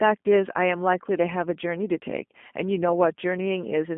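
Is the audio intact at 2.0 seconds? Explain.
No. At 2.0 s the speech carries G.729 codec damage, as it does for the whole clip. The codec rebuilds each 10 ms frame from a vocal tract filter, a pitch predictor and a few coded pulses, at a rate consistent with 8 kbit/s. Nothing above 3.5 kHz survives, and the line band runs about 200 Hz to 3.4 kHz, so the speech sounds muffled and plainly rough and synthetic.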